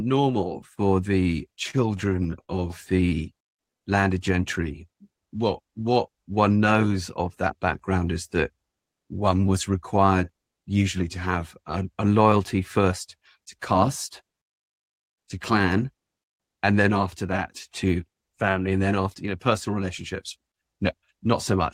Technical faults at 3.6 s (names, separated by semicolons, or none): jitter buffer slow-down